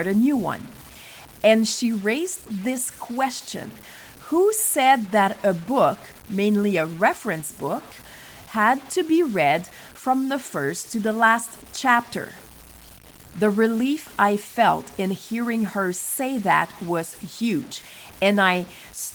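From start to finish the speech carries a grainy distortion that rises and falls with the signal. Quiet syllables and decays turn gritty, and the faintest tails sputter between steps or drop to silence. The likely cause is low bit depth without dither, and the sound fits truncation to 7 bits, with error roughly 25 dB below the signal. A waveform shows staircase steps in quiet passages. A spectrogram shows broadband hash that tracks the speech and vanishes in pauses, above the full-band Opus content reaching about 20 kHz.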